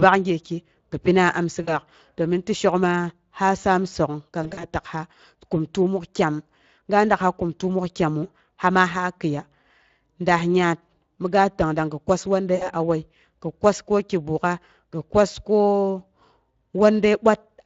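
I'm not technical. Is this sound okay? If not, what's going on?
No. The whole recording has the Speex codec's damage: the speech sounds rough and hoarse from start to finish. Unlike a bad microphone or background noise, this roughness comes from squeezing of the voice data, so it sits inside the speech itself.

There are also three moments of VoIP packet loss concealed by the speech codec, at 1.63 to 1.79 s, 4.43 to 4.67 s, and 12.55 to 12.68 s. Bits of the transmission went missing, and the decoder filled the gaps by stretching the last sound into a fading buzz or noise. Unlike a clean dropout, the sound stays weak or distorted for a moment afterwards. The middle one is a cluster of small breaks spread over about 200 ms.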